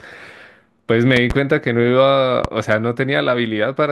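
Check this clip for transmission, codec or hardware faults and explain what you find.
Two bursts of loud pops break through the speech. From 1.17 to 1.33 s there is a double pop. From 2.45 to 2.47 s there is a single one. Each peaks about 15 dB above the speech. A sudden voltage step, likely from static or a switching glitch, caused them. The speech carries on underneath.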